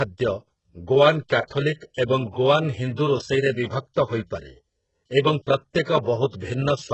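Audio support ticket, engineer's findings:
Encoder running HE-AAC compression, likely at a very low bitrate. Top band rebuilt by spectral band replication, not coded. Heavy damage throughout: nothing above 8 kHz, s sounds gritty and lispy, speech treble metallic where copied harmonics misalign.

Transform block quantisation noise spread ahead of sharp attacks: pre-echo. Short hiss at 1.28 s before a speech onset. Longer smear 5.82–5.87 s, about 47 ms of noise filling the quiet gap. Attacks in both places sound softened.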